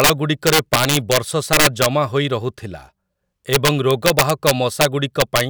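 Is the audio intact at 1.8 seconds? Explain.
No. At 1.8 seconds the speech sits inside a burst of integer overflow running from 1.53 to 1.86 s. The level was pushed about 6 dB past the largest value the integer format can hold. Nothing limited those peaks. Instead they wrapped around to the opposite sign, jumping across the full range in a single sample. Each loud peak becomes a violent crack. These cracks are far harsher and sharper than ordinary clipping.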